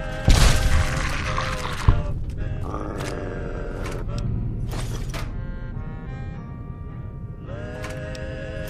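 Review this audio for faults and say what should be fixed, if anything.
No faults turned up in this audio, so nothing needs to be fixed.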